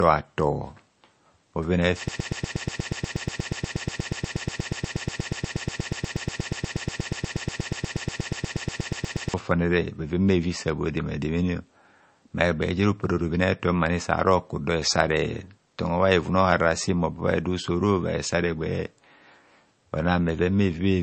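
From the start, the speech carries MP3 compression damage that is plainly audible. Nothing sounds above about 8.3 kHz, so sibilants lose their top, and the thin, watery swirl in the remaining treble points to a low bitrate, something like 35 kbps. That fixed shelf and the flickering, chirpy texture distinguish it from a simple low-pass filter, which would dull the sound but leave the remaining band stable. The likely cause is an encoder starved of bits, dropping weak frequency lines frame by frame.

From 2.08 s to 9.34 s the sound becomes a broken-record loop. A 120 ms fragment repeats back to back, exactly the same each time, about 60 times, producing a rapid mechanical stutter. Everything that should have been heard in those seven seconds is missing. Unlike a dropout, there is no silence, and unlike an echo, nothing decays or overlaps. The likely cause is a stalled player or stream that kept resending its last buffered chunk.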